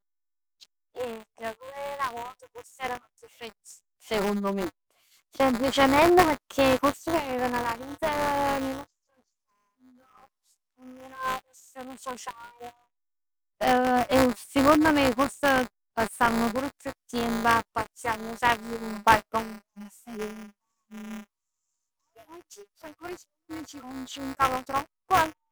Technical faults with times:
0.00-25.52 buffer tearing

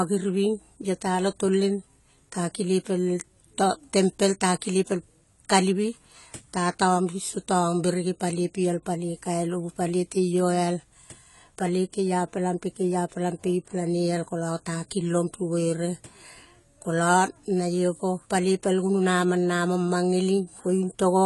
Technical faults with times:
0.00-21.25 AAC compression

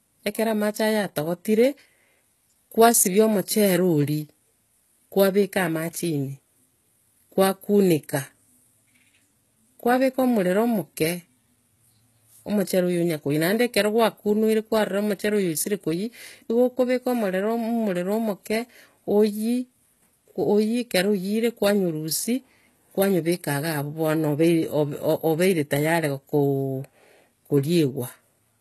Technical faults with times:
0.00-28.60 HE-AAC compression

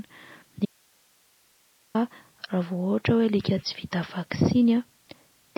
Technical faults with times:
0.00-5.58 MP3 compression
0.65-1.95 audio dropout to a faint residue

